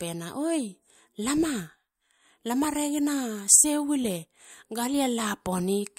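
Sharp single clicks sound at 2.64 s and 3.52 s in the speech. Each is likely dropped samples, a fraction of a millisecond lost, making the waveform jump abruptly.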